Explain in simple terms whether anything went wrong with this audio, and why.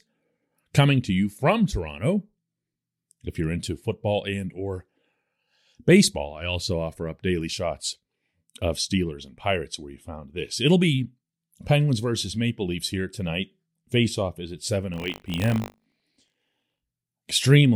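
From 14.92 to 16.81 s the speech takes on a robotic buzz, about 50 times a second. This is buffer tearing: the playback hardware and the program filling its buffer fell out of step, so a small slice of each buffer replays sound from a fraction of a second earlier.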